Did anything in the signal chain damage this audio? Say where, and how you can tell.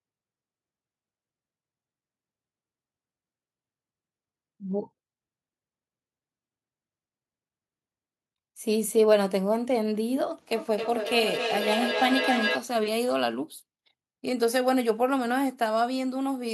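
Yes. From 10.55 to 12.71 s the speech comes back on itself at a steady spacing of roughly 300 ms, with repeats thinner and more ringing than the original and reaching about 4 dB below the speech level. That is feedback echo between two devices in the call processing stage. A second device on the same call in the room replays this side's audio, and the microphone picks it up again. The local echo canceller removes only what its own device plays, so this loop passes through.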